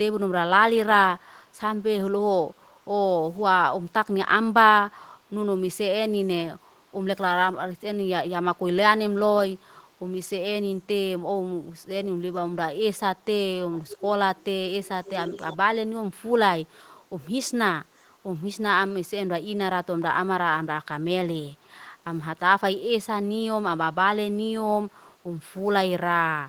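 The far end is likely playing the call over a loudspeaker with an echo canceller that fails to cancel everything its microphone picks up, so some of it returns as echo leak. From 13.72 to 14.05 s and again from 14.85 to 15.57 s, a faint delayed copy of the speech trails the original by about 542 ms, sitting roughly 15 dB below it, so a delayed repeat follows the speech there.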